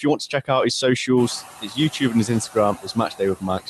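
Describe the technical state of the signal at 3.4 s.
At 3.4 s you're inside a stretch of speech cut by the noise suppressor, running from 2.73 s to the end. It mistook the speech for background and pulled it down as much as about 21 dB, so it sounds faint and swallowed. Noise suppressor artifacts are present too, as they are all through the clip: the steady noise is cut by about 11 dB frame by frame.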